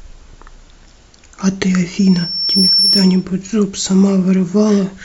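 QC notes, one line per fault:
1.98–3.24 s, loudspeaker feedback squeal: A pure tone near 5.4 kHz swells out of the speech over roughly 0.7 s and ends up a few dB louder than it. The microphone is hearing its own loudspeaker. At that frequency the loop gain passes one, so the tone feeds itself.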